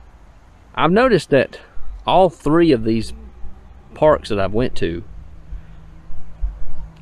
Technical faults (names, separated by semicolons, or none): none